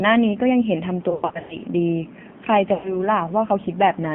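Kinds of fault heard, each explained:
AMR narrowband mobile codec: speech squeezed into a 2G/3G mobile codec, heard as a 150 Hz to 3.5 kHz band with plainly buzzy, synthetic texture, not simple band-limiting, which fits roughly 7.4 kbps.
Lost AMR speech frames: decoder reused the last pitch and vocal tract settings with falling gain, so speech smears and fades rather than clicking out, between 1.10 and 1.59 s and again 2.74 to 3.01 s.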